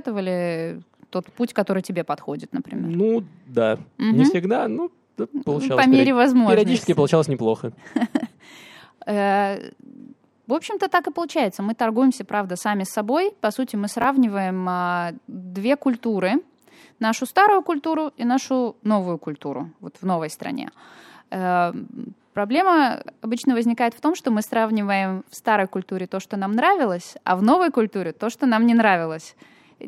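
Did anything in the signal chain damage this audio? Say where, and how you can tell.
Yes. Chunks out of order at 14.02 to 14.04 s: a brief jumbled blip in the speech. At the driver or buffer stage, one 10 ms chunk was delivered a chunk late and played after its successor, so nothing is missing but there are three hard joins.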